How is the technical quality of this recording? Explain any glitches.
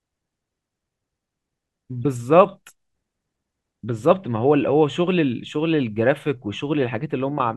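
No glitches or technical faults can be heard anywhere in the recording.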